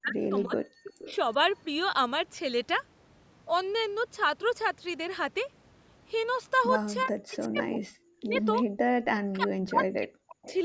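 From the start to 0.63 s, the speech sinks and breaks up. Across about half a second in total it drops by up to about 35 dB. This is speech suppressed in double talk. The likely cause is both sides talking at once. The echo canceller could not tell the near talker from the loudspeaker echo, so it pulled the whole microphone signal down.

Between 0.83 and 1.15 s, a faint second copy of the voice trails behind it. It arrives 370 ms late, about 20 dB below the main speech. This is an echo leak. It likely comes from a far end on loudspeaker whose canceller let part of the returning sound through. It is heard as a short scrap.

The same double-talk suppression returns from 7.05 to 8.38 s. This time about a second of the speech is affected. The level drops by up to about 40 dB, so parts of it fall almost silent.

From 8.66 to 8.79 s, the room sound itself drops out. It dips by about 31 dB for roughly 150 ms, then comes back. 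This is background gated by the echo canceller. The canceller clamped the microphone hard while the loudspeaker played, then released it.

From 9.16 to 10.48 s, the speech is suppressed again. About a second is affected, with drops of up to about 40 dB. At 10.46 to 10.54 s, a brief echo leak appears. It has the same 370 ms delay and sits about 20 dB down.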